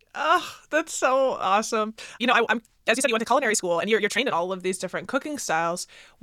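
From 1.73 to 4.35 s, just after "that's so", there is a time-stretched section. The speech suddenly runs about 1.94 times faster, yet its pitch holds steady. It sounds rushed. Software likely squeezed this stretch by dropping short pieces.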